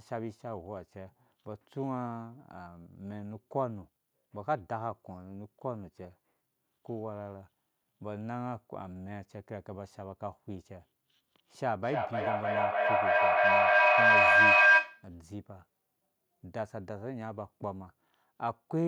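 Feedback howl from 11.83 to 15.11 s breaks into this speech recording. A tone near 1.5 kHz swells to about 14 dB above the voice, pulsing roughly every 300 ms, as two devices sharing a call in one room re-amplify each other on every pass.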